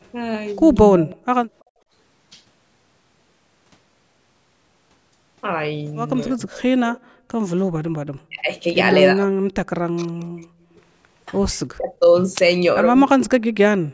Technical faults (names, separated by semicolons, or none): speech suppressed in double talk; echo leak; background gated by the echo canceller